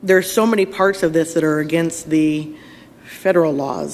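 No technical faults are audible anywhere in the audio.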